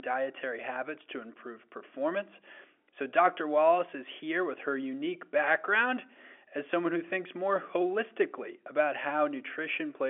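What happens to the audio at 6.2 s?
Nothing goes wrong at 6.2 s: the audio is intact there, carrying on in the same narrow telephone band as the G.711 line it passes through, with no dropout, click or distortion at that point.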